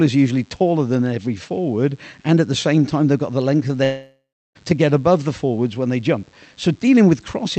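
A speech recording that's come through a call codec, with the top end stopping around 8 kHz. Running under the whole thing is a raspy mains buzz built on 50 Hz harmonics, sitting quietly, well below the speech but steady enough to notice. From 3.83 to 4.57 s the audio smears into a fading buzz or hiss, goes near-silent for about a third of a second, then picks back up with roughly 0.72 s missing, most likely a long network dropout.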